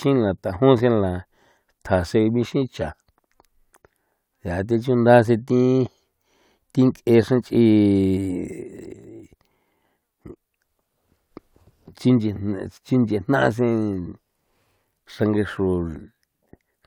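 No technical faults can be heard anywhere in the speech recording. At no point does the signal break, drop out or change character.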